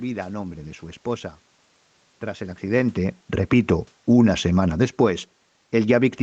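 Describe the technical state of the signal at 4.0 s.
At 4.0 s the automatic gain is falling, a drift that runs from 2.63 to 5.06 s. The gain control judged the input too loud or its background noise too strong and lowered its gain gradually, by about 4 dB. The speech and the room noise sink together.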